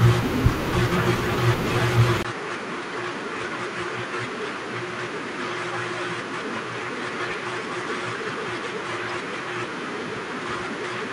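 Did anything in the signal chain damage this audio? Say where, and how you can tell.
Yes. At 2.23 s there is a 20 ms gap, and from then to the end the speech is about 10 dB quieter, with nothing above 10.5 kHz and a new, different background noise sitting roughly 45 dB under the voice. The likely cause is an input switched to a poorer device at the driver or device-selection stage: the system swapped its input mid-recording, and the replacement's narrower band, its own tone and lower gain make the speech sound duller and more boxed-in from that moment on.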